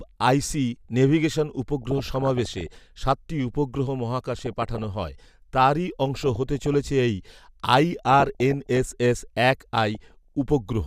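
DAB burbling appears five times: 1.82–2.77 s, just before "সাতটি উপগ্রহ", then 4.31–4.84 s, 6.23–6.74 s, 8.11–8.78 s and 9.95–10.35 s. Bit errors of under one percent slip past error correction and corrupt MP2 sub-band samples and scale factors. Single bands jump in level for up to a frame, producing short noise blips over the speech.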